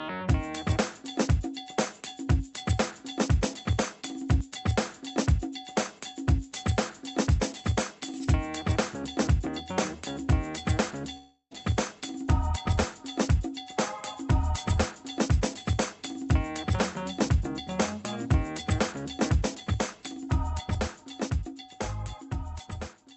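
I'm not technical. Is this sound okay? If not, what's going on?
No. From 11.17 to 11.53 s the sound turns into a fading buzz, then briefly silence. This is likely a long network dropout: about a third of a second never arrived.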